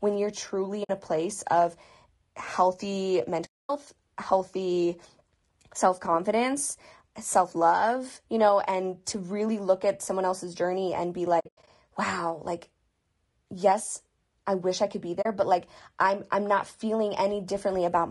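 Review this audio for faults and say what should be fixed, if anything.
Throughout the speech there is audible low-delay AAC compression damage, likely from AAC-ELD running near 32 kbps. Its short frames resolve pitch harmonics poorly, so the voice sounds rough and grainy. On a spectrogram, noise fills the gaps between harmonic lines and the top band looks thinned or smeared. The waveform shows little. Raising the bitrate, or using a longer-frame codec where latency allows, would prevent this.

AAC frame loss with muting opens soft-edged silent holes at 0.83–0.90 s (60 ms), 3.45–3.70 s (240 ms), 11.40–11.68 s, and 15.21–15.26 s (40 ms). In the 11.40–11.68 s stretch, about 200 ms of dropouts are scattered over 280 ms, with the longest run roughly 100 ms. The lost frames' spectra were set to zero, and the overlapping windows fade the sound down and back up. On a spectrogram these appear as blank vertical gaps, and the waveform shows tapered dips to silence. 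The hole lengths fit 20 ms frames. Packet-loss concealment plus jitter buffering or forward error correction would prevent these holes.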